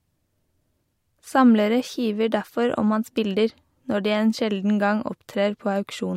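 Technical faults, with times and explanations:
Nothing stood out as a technical problem when listening to this speech recording.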